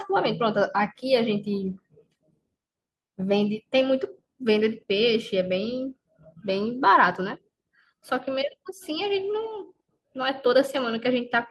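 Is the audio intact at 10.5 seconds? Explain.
Yes, at 10.5 seconds the speech plays through cleanly, with no fault to be heard at that moment.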